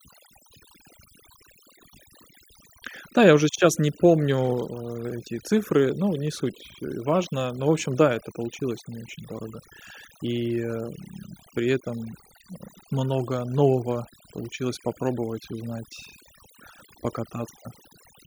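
A noise reduction stage was driven far too hard, producing overdone noise removal across the whole clip. Frequency bands close to the processor's estimate of the noise floor are pushed down hard or gated off, and the quieter parts of the speech sitting near that floor are removed along with the noise. The background drops away and breaks up into twinkling, chirpy specks.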